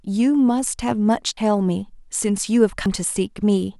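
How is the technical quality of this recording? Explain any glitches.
The recording has two dropouts from compressed frames skipped. At 1.37 s and 2.86 s the decoder jumped over missing or damaged frames, losing roughly 200 ms and then 100 ms of speech, about two frames and one at 92.9 ms each. At each join the speech jumps ahead by the length of the frames left out.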